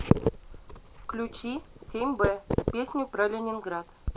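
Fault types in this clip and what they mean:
Nothing stood out on listening to this speech recording.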